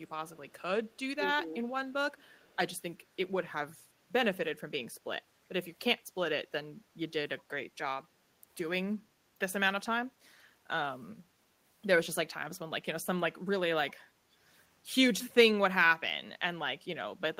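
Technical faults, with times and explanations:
0.0–0.1 s, 0.35–0.62 s, 0.86–0.99 s, 2.17–2.56 s, echo leak: a loudspeaker-side echo canceller likely missed residue, so faint scraps of the speech return about 366 ms late, roughly 35 to 40 dB down.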